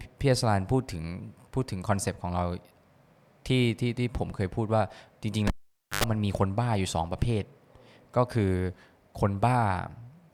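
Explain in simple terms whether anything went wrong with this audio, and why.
Around 5.47 s a cable pulled and plugged in cuts the speech: a pop, half a second of near silence, a brief 50 Hz buzz, another pop by 6.04 s.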